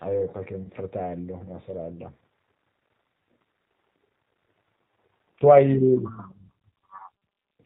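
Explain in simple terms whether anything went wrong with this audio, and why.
G.729 codec, throughout the whole recording: the speech has passed through a low-rate phone codec, and the damage is plainly audible. Instead of sending the actual sound, the codec sends a compact description of the voice, its pitch and the shape of the throat and mouth, plus a few pulses, and the far end rebuilds speech from that. Nothing above 4 kHz survives, so the voice sounds muffled, slightly rough and a little artificial, though still understandable.

VoIP packet loss concealed by the speech codec, at about 0.63 to 0.68 s: one small chunk of the call, about 30 ms of audio, never arrived. Rather than leave silence, the decoder guessed by repeating the last pitch and voice shape it had, turning it down as it went. At that moment there's a brief buzzy or smeared patch. Because each new slice is built on the previous one, the voice can sound slightly off for a moment after the real audio returns.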